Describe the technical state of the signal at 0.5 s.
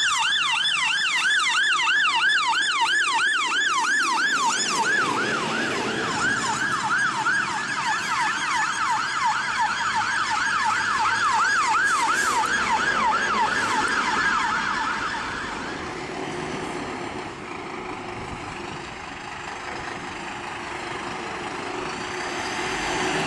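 Nothing goes wrong with the signal at 0.5 s; the audio is intact at that moment.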